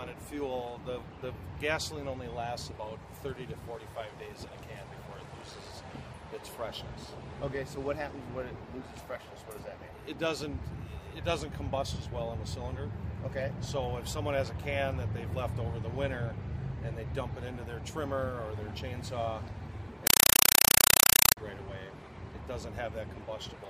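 From 20.07 to 21.37 s, a compressed stream played as audio: undecoded AC-3 data arrives as 4 ms noise bursts, 31.25 times a second. It sounds like harsh, loud, chattering static.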